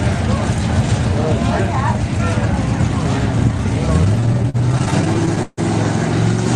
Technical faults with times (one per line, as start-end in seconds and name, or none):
4.01-5.59 repeated stalls (stutter)